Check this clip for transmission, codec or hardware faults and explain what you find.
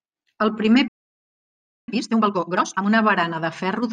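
Two faults are audible, a stall followed by a catch-up phase.

At 0.88 s the speech cuts off into silence for about one second, resuming at 1.88 s. This is a playback stall, likely the player running out of buffered data or its output thread being blocked, so nothing reached the output until it recovered.

From 1.88 s to 2.86 s the speech runs at twice normal speed with unchanged pitch. This is time-compressed catch-up: the player drops short segments and cross-fades the joins to clear the backlog built up during the stall.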